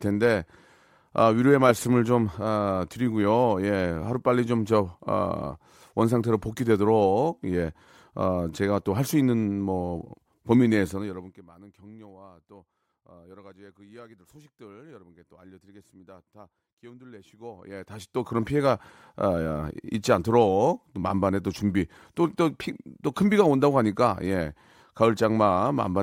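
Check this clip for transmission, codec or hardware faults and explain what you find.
The speech has zipper noise twice. From 10.84 to 11.50 s, the level falls about 25 dB in 1 dB steps. From 17.24 to 18.46 s, it rises about 25 dB. Each fade is applied in unsmoothed steps, roughly fifty a second. Each step clicks, so a fast ticking rides on the speech while the level moves.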